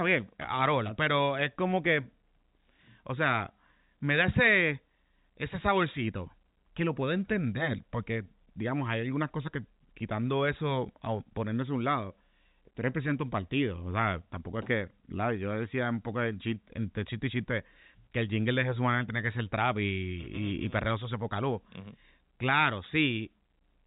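No technical faults can be heard anywhere in the speech. It carries the sound of G.711 telephone coding, with the band stopping at about 3.8 kHz and any quantisation noise riding under the speech at a faint level.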